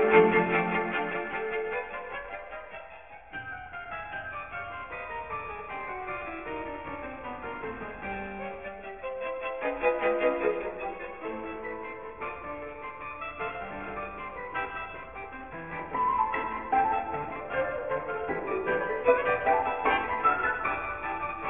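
Aliasing runs through the whole clip. The top stops hard at 3 kHz, which points to a drop to a 6 kHz rate without filtering first. Content above that folds back to unrelated pitches, only about 10 dB below the signal. Highs sound gritty and metallic.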